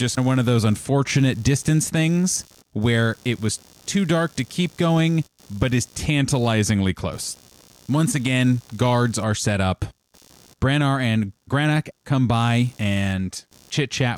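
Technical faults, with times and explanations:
Throughout, computer activity noise: there's a faint buzzy, chirping layer sitting roughly 30 dB under the speech, pulsing at around 70 times a second. It doesn't follow the talking at all; it tracks whatever the computer is doing. Shifting load on the processor, graphics card or even the mouse pulls the ground shared with the audio circuit around, and that wobble gets printed straight into the signal as this rasping texture.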